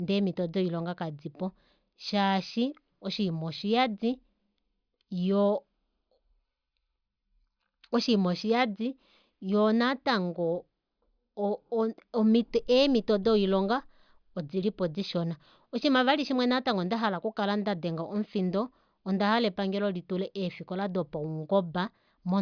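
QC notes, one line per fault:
Nothing to flag here; no problems turned up anywhere in the recording.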